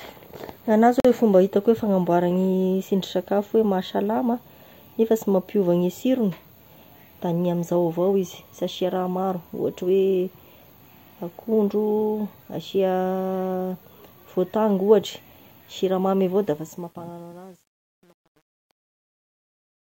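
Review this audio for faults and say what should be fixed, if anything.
At 1.00 s the speech cuts to silence for 46 ms and resumes where it stopped, likely a Bluetooth stall where delayed packets emptied the headphones' buffer. Keeping the link short and clear of interference, or recording over a wired connection, would prevent it.

From 16.43 s to the end, the fade-out turns gritty, worst from 16.94 s. This is truncation distortion on a fade: the quiet tail is quantised to about 9 bits without dither, so it becomes coarse steps. Running the fade at full bit depth and dithering on the final reduction would prevent it.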